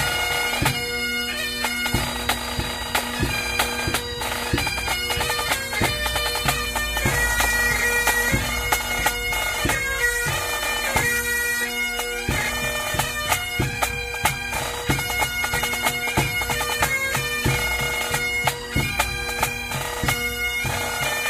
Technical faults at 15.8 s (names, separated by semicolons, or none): none